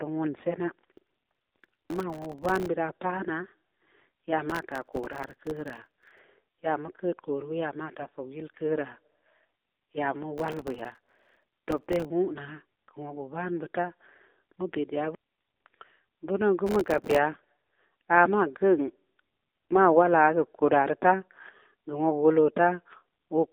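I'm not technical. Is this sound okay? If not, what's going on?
No. The whole clip goes through the AMR narrowband mobile codec, the old phone-call voice format. It keeps roughly 250 Hz to 3.7 kHz, so speech sounds thin and muffled. At this low quality setting it also sounds clearly buzzy and artificial.

Processor overload crackle appears at 0.92–2.68 s, 4.50–6.19 s (just before "ya mu keud kori"), 10.38–12.05 s and 16.67–17.18 s. The computer fell behind on very small chunks of sound, each about a millisecond and a half long. Many were dropped in a row, and each one left a brief silent gap. Together the gaps make gritty crackling.

AMR bit errors occur at 7.98–8.14 s, right after "ya maa", and at 17.32–17.44 s. A weak phone link corrupted parts of the coded speech. The voice keeps its pitch and loudness but turns scratchy and gargly for a split second. The second one is the harsher of the two.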